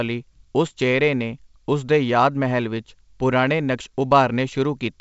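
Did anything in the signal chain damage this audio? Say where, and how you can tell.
No, nothing in the signal chain damaged this audio, and the G.722 wideband telephone coding at 64 kbit/s leaves at most a faint trace.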